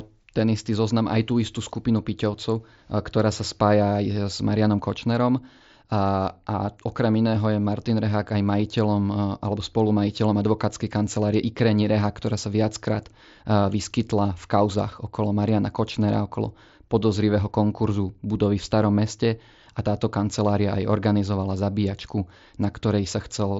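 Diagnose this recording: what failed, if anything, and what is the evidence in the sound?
Nothing stood out on listening; the speech comes across as it would over a wideband Bluetooth headset link using mSBC, with no failure at any stage.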